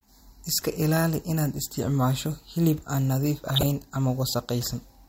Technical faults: DAB burbling

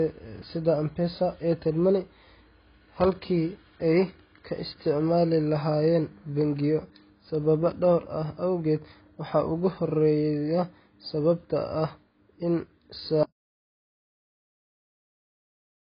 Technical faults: AAC compression; audio dropout to silence

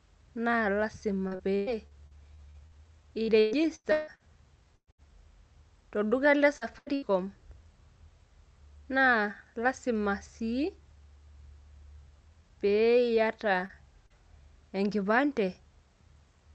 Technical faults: repeated packet loss (robotic sound); short concealed packet loss; burst of packet loss

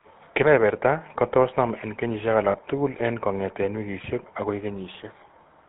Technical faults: GSM full-rate codec; lost GSM frames

